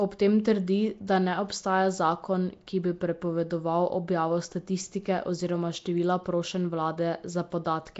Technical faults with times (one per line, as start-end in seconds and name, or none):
0.00-7.99 Nellymoser compression